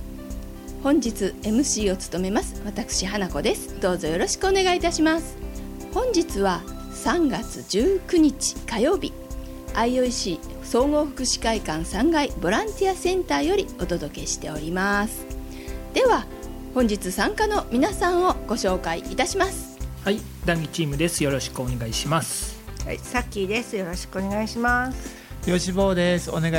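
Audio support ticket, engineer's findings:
Timecode bleed, full length of clip. Steady chirping warble behind the audio, tones switching near 1 kHz and 2 kHz, roughly 35 dB under programme level. Probable component: adjacent LTC track or unshielded timecode cable coupling into the audio path. Square-wave biphase code toggling between two frequencies; frame cadence fits 23.976 fps code. Check routing, cable separation, and track isolation.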